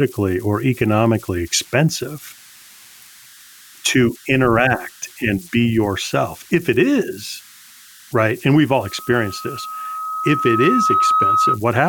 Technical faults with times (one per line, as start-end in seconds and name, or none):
0.00-11.88 converter idle tones
8.83-11.59 loudspeaker feedback squeal